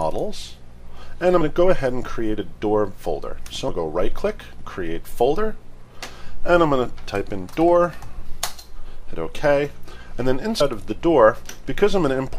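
At 1.40, 3.67, 8.85 and 10.60 s, compressed frames are skipped. Whole frames are dropped, so the sound jumps ahead by roughly 50, 200, 70 and 100 ms respectively, in steps consistent with frames of about 26 ms. Each join is a brief smeared blip: on the waveform, the envelope shifts abruptly; on the spectrogram, the patterns are cut with no sharp vertical click line.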